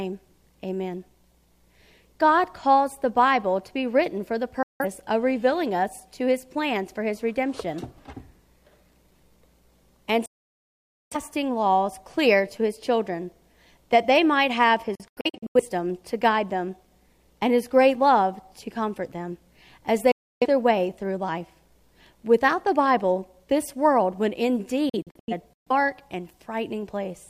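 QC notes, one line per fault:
4.63 to 25.72 s, digital broadcast dropout: abrupt mutes at 4.63 to 4.85, 10.26 to 11.16 (longest, 0.85 s), 14.95 to 15.61 and 24.89 to 25.72 (several short holes each, longest 85 ms and 128 ms), and 20.11 to 20.46 s. The receiver lost whole frames, fitting roughly 43 ms blocks, and silenced output with 3 ms fades until clean frames returned, so that audio is gone.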